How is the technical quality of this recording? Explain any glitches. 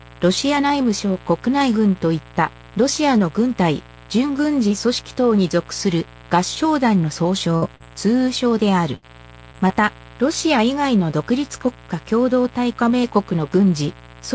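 The recording has a constant mains buzz and a cluster of dropout glitches between about 7.5 and 9.7 seconds. It also has an 8 kHz top end, which fits a G.722 call path at 64 kbps.

Mains buzz runs the whole way through, at 60 Hz and sitting roughly 25 dB under the signal. Switching spikes from something like a dimmer, rectifier or unshielded lead land twice per mains cycle. Their harmonics stack up into a steady, raspy buzz.

There are two bursts of packet loss, at 7.56 to 7.64 s and 8.96 to 9.04 s. Packets arrived too late or not at all. The receiver stretched the last sound for about 58 ms and 64 ms respectively, fading it down, so you hear a held buzz or fading hiss. Then the audio jumps ahead with about 60 ms missing each time.

Short concealed packet loss shows up at 7.76 to 7.82 s, 9.52 to 9.56 s and 9.68 to 9.71 s. The decoder patched about 40 ms, then 16 ms twice, by continuing the previous sound and blending back in. 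Each one sounds like a quick smear or wobble, with about 40 ms, 20 ms and 20 ms of real audio gone.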